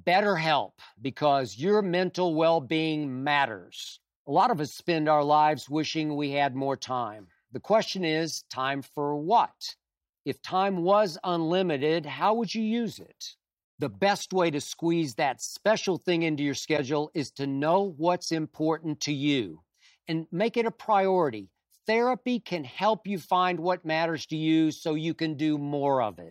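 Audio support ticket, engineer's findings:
Short glitch in the speech at 16.76–16.79 s, about 30 ms, roughly one MP3 frame's worth. The likely cause is a broken MP3 bit reservoir. Frames went missing, so the next frame pulled borrowed bits from the wrong data and playback jumped ahead.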